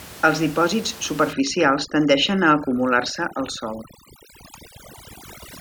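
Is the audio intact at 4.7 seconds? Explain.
No. At 4.7 s the clip is inside a stretch of overdone noise removal running from 1.33 s to the end. Bands near the noise estimate are pushed almost to nothing, so the room noise about 18 dB below the speech collapses into near silence with twinkling specks. A low-bitrate codec would smear the whole sound instead of hollowing the gaps.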